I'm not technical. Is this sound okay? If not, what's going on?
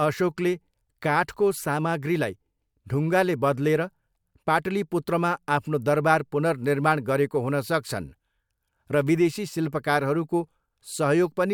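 Yes, nothing stood out as wrong when listening to this recording.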